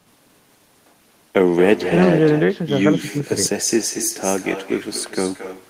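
Speech runs throughout with echo with no canceller: every phrase returns roughly a fifth of a second later as a copy about 10 dB quieter and thinner. The far end's loudspeaker feeds its microphone unremoved. A spectrogram shows each syllable's pattern faintly repeated just behind it, and the waveform shows trailing ghost envelopes.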